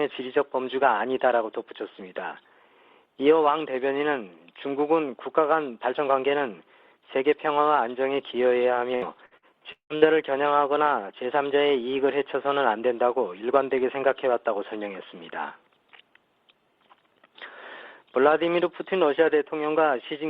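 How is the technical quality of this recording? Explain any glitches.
One glitch: repeated packet loss (robotic sound) from 8.95 to 10.05 s. Five dropouts, the longest about 177 ms, were patched by extending preceding audio, leaving it choppy.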